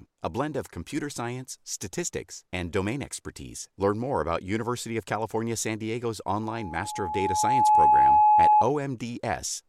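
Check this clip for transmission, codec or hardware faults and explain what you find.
One fault is present: loudspeaker feedback squeal from 6.42 to 8.65 s. An 849 Hz tone builds over roughly a second and a half and howls well above the speech, because the microphone re-amplifies its own loudspeaker with loop gain above one.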